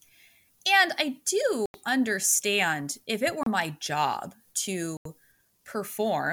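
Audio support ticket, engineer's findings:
Speech drops to dead silence three times, resuming where it left off. 1.66 to 1.74 s, about 83 ms gap, just before "understand if it". 3.43 to 3.47 s, 30 ms gap, between "understand if it" and "my job". 4.97 to 5.06 s, about 83 ms gap. Likely Bluetooth stall: radio interference delays packets, the headphone buffer empties, and output halts until retransmissions land.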